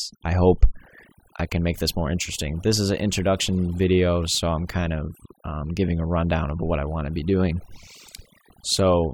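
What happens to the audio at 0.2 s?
Overdone noise removal is at work at 0.2 s, as it is through the whole clip. A noise reduction stage set far too aggressively is clamping down any frequency band that sits close to its estimate of the background noise, and the quietest parts of the speech fall below that line and vanish too. The background drops away and breaks up into twinkling, chirpy specks.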